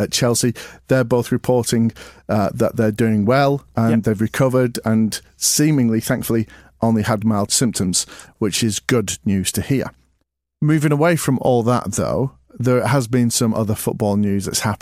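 Speech, with no audible faults.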